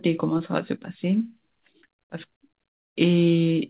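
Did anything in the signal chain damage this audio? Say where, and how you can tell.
Yes, at the network stage: short concealed packet loss at 0.38–0.41 s and 2.93–2.97 s. Both are brief smears where 20 ms went missing and the decoder stretched the previous sound across the gap.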